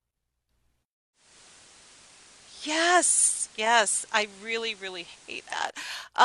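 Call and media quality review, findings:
Digital radio blending to analogue, 1.13 to 5.72 s: hybrid receiver drops digital, cross-fades over 272 ms to FM. Level dips about 2 dB, hiss comes up, sitting roughly 25 dB under the speech.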